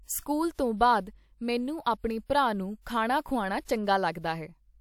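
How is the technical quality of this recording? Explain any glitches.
The recording has one codec fault, a pre-echo, between 2.82 and 2.86 s, right after "ਮੈਨੂੰ ਆਪਣੇ ਭਰਾ ਨੁੂੰ" and just before "ਖਾਣਾ ਖ਼ੁਆਨਾ". A short hiss of about 49 ms arrives ahead of the sharp onset, and the attack itself sounds softened and smeared. This happens because the transform codec spread quantisation noise, sized for the loud attack, across its whole block, filling the quiet moment before it. Unlike a genuine echo or reverb, the smear comes before the sound, not after.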